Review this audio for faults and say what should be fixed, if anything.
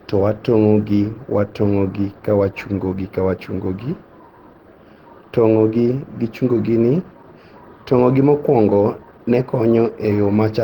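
Throughout the clip the speech sounds grainy and rough, with a hoarse edge, from likely Opus compression in its hybrid mode at a rate that fits about 16 kbps. Bands are filled with noise rather than dropped, and content reaches about 20.2 kHz. Unlike MP3, there is less swirling and few hollow gaps. Encode at a higher Opus bitrate, or keep an uncompressed master.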